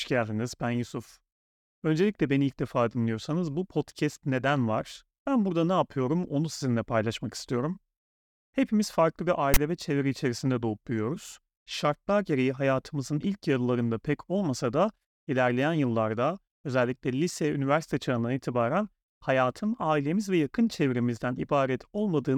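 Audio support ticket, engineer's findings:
Loud one-sided rasp, hard-edged static burst, 9.54–9.57 s, between "farklı bir" and "ve çevre içerisinde doğup". File tags played as audio: decoder/parser read a text metadata block as samples; ASCII byte values give the DC-offset rasp.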